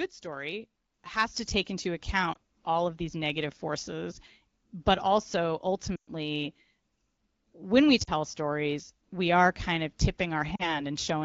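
Lost AMR speech frames crop up four times: a quick warble at 2.33–2.37 s after "has to take into", a drop to near silence at 5.96–6.09 s after "negative forces but also", a short dip at 8.03–8.10 s after "when we", and another at 10.56–10.82 s. Radio errors corrupted the frames, so the decoder stretched the last good pitch and vocal-tract settings while ramping the gain down.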